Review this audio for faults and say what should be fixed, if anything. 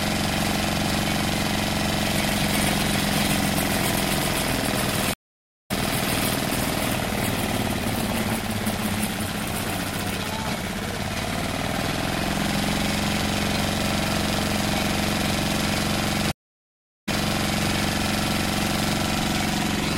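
Two stream reconnect dropouts here. At 5.14 s the sound cuts to about 522 ms of silence, then resumes at 5.71 s roughly 0.7 s further on, so a bit is skipped. At 16.32 s there's 716 ms of silence, and playback resumes 653 ms earlier, replaying material, until things settle by 17.68 s. Each time the connection dropped and a fresh decoder restarted mid-stream. To prevent it, buffer more and resume by byte or segment offset so reconnects don't skip or repeat.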